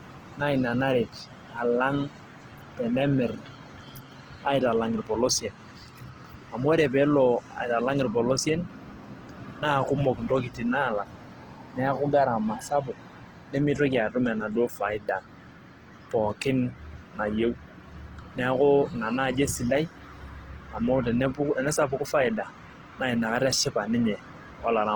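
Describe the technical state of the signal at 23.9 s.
At 23.9 s the speech carries Opus compression running through the whole clip: bands are noise-filled rather than emptied, so it sounds grainy and rough, not swirly like MP3, likely from a rate near 16 kbps.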